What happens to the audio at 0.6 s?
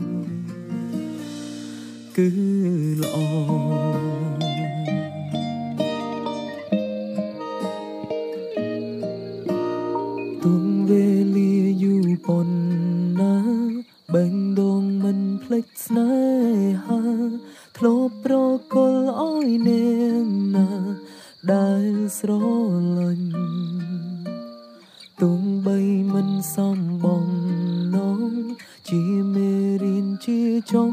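Nothing goes wrong at 0.6 s; the audio plays through that moment intact, with no dropout, click or distortion.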